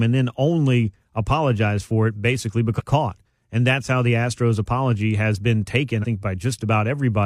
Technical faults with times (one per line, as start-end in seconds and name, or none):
2.75-2.81 compressed frames skipped
5.99-6.05 compressed frames skipped